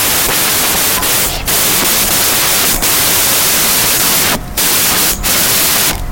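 Speech throughout the clip is buried under loud, harsh noise: a wrong sample width fault, with 16-bit integer data read as packed 24-bit. Most values mix bytes from neighbouring samples, so only fragments of the signal survive, running about 1.5 times too fast and high in pitch.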